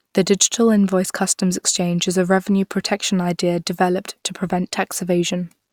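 Nothing in the speech here trips up at any point; there are no technical faults to report.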